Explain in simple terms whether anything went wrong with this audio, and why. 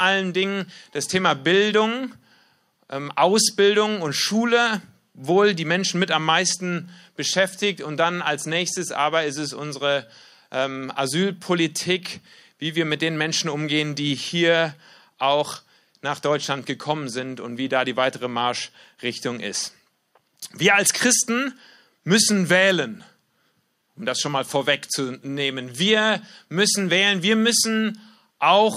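Listening carefully to this recording of speech, nothing stood out as having gone wrong.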